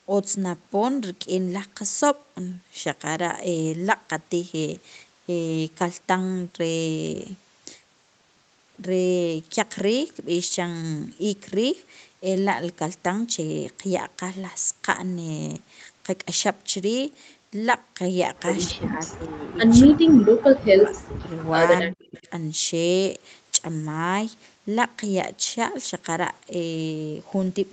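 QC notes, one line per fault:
QC notes, one line per fault:
18.71–19.60 s, 19.87–20.36 s, 20.58–21.28 s and 21.80–22.28 s, speech suppressed in double talk: this is likely the echo canceller, with both sides talking at once, failing to tell the near talker from loudspeaker echo and clamping down on everything. The speech dips by roughly 25 dB in the first span and by around 40 dB in the later three, so it is turned down over most of each span.
22.01–22.20 s, echo leak: the far end's echo canceller likely did not fully remove what its microphone picked up from its loudspeaker, and that residue came back down the line. It sounds like a faint, short scrap of the voice repeating 237 ms later, at roughly 35 dB below the speech. It lands inside the last suppressed span.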